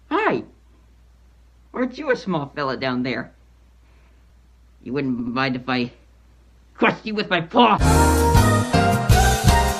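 A run of compressed frames was sent or written more than once, producing repeated frames from 5.19 to 5.35 s: the same 80 ms block of audio plays twice more, giving an audible stutter that stretches the audio by 160 ms.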